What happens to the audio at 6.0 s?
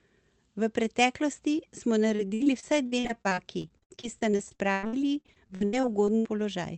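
At 6.0 s the audio is inside a run of repeated packet loss lasting from 2.09 to 6.27 s. Packets kept going missing, and each hole, the longest about 0.1 s, was patched by stretching the last sound. About a quarter of the stretch is patched in, so the speech turns choppy and robotic.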